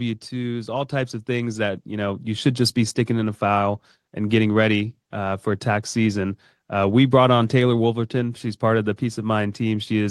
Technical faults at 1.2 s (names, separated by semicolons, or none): automatic gain rising